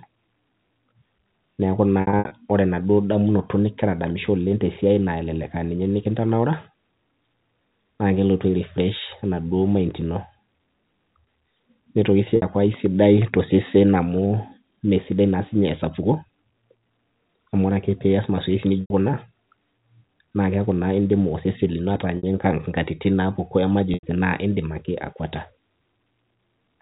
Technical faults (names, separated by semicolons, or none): packet loss with pitch repetition